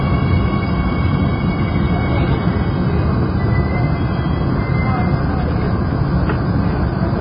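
From start to finish the sound is dull and smeared, with nothing above 5 kHz and a warbling, fizzy texture on sustained parts. This is likely heavy AAC compression: the coder cuts the top band and thins the remaining spectrum, consistent with roughly 16 kbps AAC-LC.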